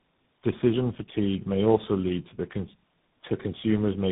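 A speech clip with tandem speech coding throughout. The sound is rough, muffled and warbly, with nothing above 3.8 kHz. Each coder re-encodes the last one's damaged output. This fits three speech codecs in a row, likely G.729A, GSM full rate and CVSD.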